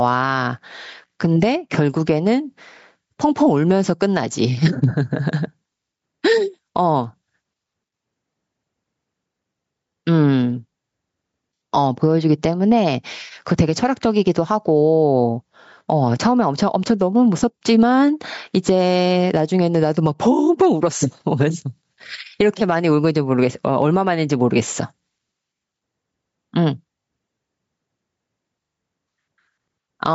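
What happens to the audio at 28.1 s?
Gain pumping runs through the whole clip, including 28.1 s: input gain set far too high, likely reined in by a fast limiter, ducks the speech around 10 dB, so loud and soft parts sit closer in level and the speech sounds squashed.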